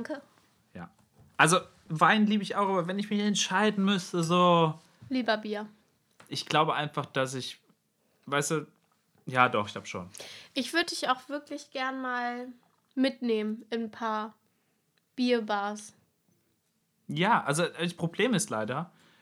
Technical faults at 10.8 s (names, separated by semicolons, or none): audio missing between chunks